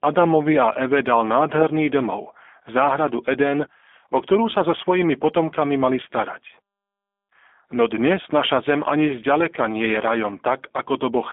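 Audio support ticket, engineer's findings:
G.729 codec damage across the whole clip, plainly audible. Speech band-limited to 200 Hz to 3.5 kHz, nothing above. Rough, synthetic timbre from the filter-plus-pulse rebuild of each 10 ms frame; consistent with an 8 kbit/s G.729A VoIP leg.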